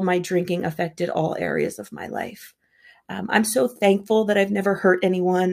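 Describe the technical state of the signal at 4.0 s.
At 4.0 s the speech signal is intact, with no technical fault present at that moment.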